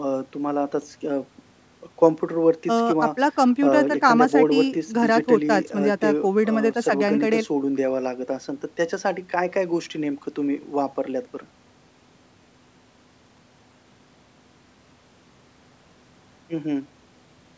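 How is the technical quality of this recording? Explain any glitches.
No glitches to report: the speech has gone through ordinary call-microphone processing, with the lowest bass trimmed by its high-pass filter and nothing above 8 kHz, and none of that is a fault.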